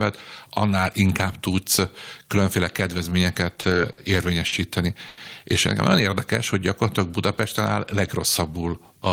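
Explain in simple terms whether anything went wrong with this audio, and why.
Short stalls from late packets interrupt the speech four times: just after "inkább tudsz különféle kedvezményeket" at 3.61–3.65 s, then at 3.92–3.99, 4.47–4.54 and 5.08–5.19 s. The player briefly stretched the last sound while waiting, then resumed at the same point. Unlike lost packets, nothing is skipped; the speech just falls slightly further behind.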